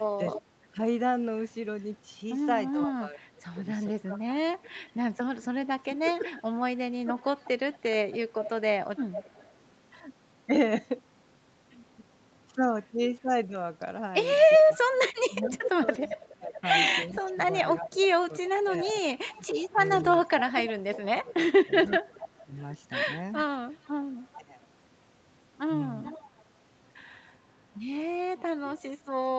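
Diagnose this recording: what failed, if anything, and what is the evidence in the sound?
Speech suppressed in double talk, 0.16 to 8.35 s and 14.58 to 24.66 s: the voice dips repeatedly, by as much as about 25 dB and then about 20 dB, for roughly 3 s and 4 s in total. This is likely the call's echo canceller mistaking overlapping speech for echo and attenuating it.

Echo leak, briefly at 0.34 s, then 3.88 to 9.47 s and 15.43 s to the end: a delayed copy of the speech trails by 407, 413 and 427 ms, about 10 dB below the direct voice. This likely comes from residual loudspeaker echo that the far end's canceller failed to remove.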